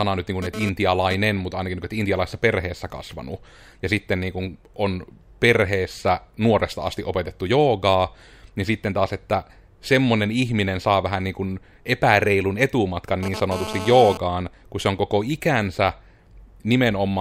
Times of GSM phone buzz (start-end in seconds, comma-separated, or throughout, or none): 0.42-1.15, 13.23-14.18